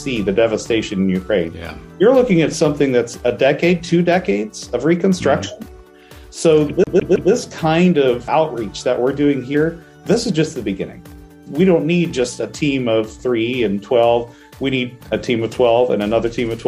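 From 6.84 to 7.32 s the CD is stuck on one turn: a scratch keeps knocking the laser back a track, so a 160 ms slice of sound repeats three times, each jump marked by a brief mute. Unlike a dropout or buffer glitch, the stutter is fast and perfectly even.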